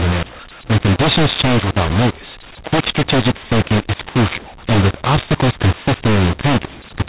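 From start to finish the speech carries a mu-law and A-law mix-up: G.711 samples coded as mu-law are being decoded as A-law. Levels come out scrambled, with quiet samples pushed well above silence, so the speech sounds harsh and distorted and pauses fill with hiss.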